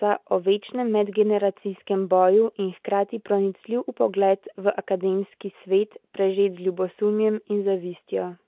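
A speech recording with no technical faults to report. It comes through the fixed-line telephone channel's mu-law G.711 coding at 8,000 samples a second, so nothing is heard above 4 kHz, and a faint hiss about 38 dB below the signal rises and falls with its level.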